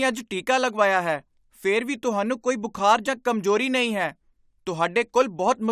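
No technical faults can be heard anywhere in this speech recording. The sound runs continuously, with nothing interrupting or disturbing it at any point.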